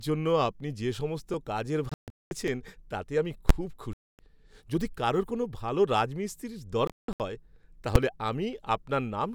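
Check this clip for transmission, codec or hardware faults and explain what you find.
The clip has three kinds of fault: two tiny skips, three Bluetooth-style silences, and two loud full-scale bangs.

Dropped buffer (overrun) at 1.34 s and 2.48 s. The likely cause is that the program fell behind and the hardware overwrote a buffer before it was read. That would remove a few milliseconds and splice the two sides together. Each is heard as a slight jump in the speech.

Bluetooth dropout at 1.89–2.31 s, 3.93–4.19 s and 6.87–7.20 s. This is likely packets arriving too late for the headphones and being discarded. The output goes silent. In the first and third gaps the silence is broken up, with the longest runs at about 209 ms and 163 ms. Speech resumes further along, as if it had kept playing during the gap.

Invalid numbers at full scale at 3.49 s and 7.95 s. A calculation produced infinite or invalid values, and these were pinned to maximum amplitude for a block of 10 ms and then 5 ms. 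Because both blocks are so short, each is heard as a single very loud bang.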